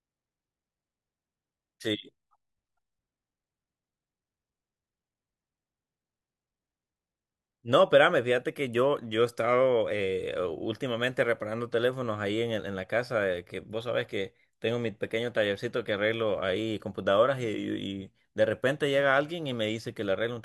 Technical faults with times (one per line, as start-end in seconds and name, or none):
none